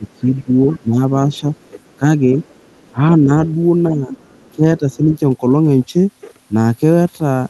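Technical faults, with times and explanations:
0.0–3.32 s and 3.88–5.01 s, speech suppressed in double talk: the speech dips by about 15 dB, then about 10 dB, in patches, likely the echo canceller ducking while both sides talk, unlike steady codec dropouts.
0.09–0.78 s, 1.37–2.92 s and 4.12–4.96 s, other side's voice leaking through: a faint second voice sits about 35 dB, then about 25 dB, below the speech, likely uncancelled loudspeaker echo rather than room reverb, since it carries different speech.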